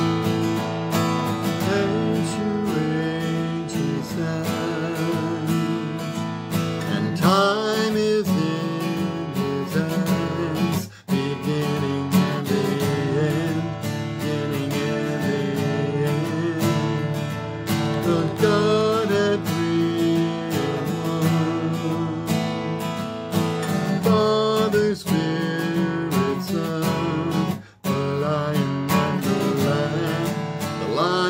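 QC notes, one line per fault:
17.86–18.82 s, train of clicks: roughly ten near-identical ticks at a steady 11.5 per second, peaking a few dB above the sound, likely from electrical interference or a faulty connection; their matched shape and even spacing separate them from random crackle.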